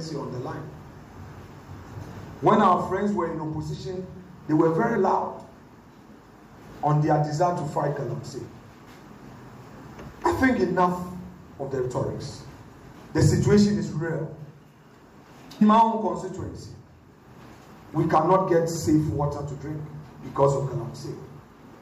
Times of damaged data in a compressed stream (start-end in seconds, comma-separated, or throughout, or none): 4.95, 11.84, 15.61, 17.93